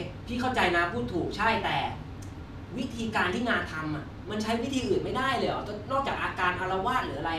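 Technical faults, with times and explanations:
No technical faults can be heard anywhere in the recording; the signal stays steady and intact from its first moment to its last.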